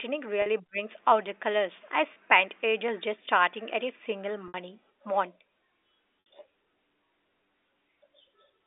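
Brief held, buzzy moments at 0.42 and 2.14 s, and short fades into silence at 4.48 and 6.23 s, come from packet loss with pitch repetition. Gaps of 40, 20, 60 and 60 ms, which fits 20 ms packets, were bridged by repeating the last pitch period and fading it out.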